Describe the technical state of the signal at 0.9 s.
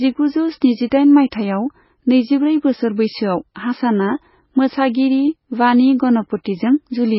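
At 0.9 s the signal carries heavy MP3 compression, likely from encoding at a very low bitrate, with the damage consistent with something around 16 kbps. Starved of bits, the encoder has removed everything above 5.5 kHz and zeroed weak frequency lines that flicker in and out between frames. The speech therefore sounds dull and muffled, with a watery, swirling texture, metallic chirps on s sounds, and consonant attacks smeared rather than crisp.

A pre-echo sits between 0.90 and 0.92 s, spreading over about 20 ms. The transform codec spread the quantisation noise meant for a sharp attack across its whole block, so noise sized for the loud onset also fills the quiet moment just before it. The result is a brief hiss leading into the attack, which then lands softened and blurred instead of starting cleanly.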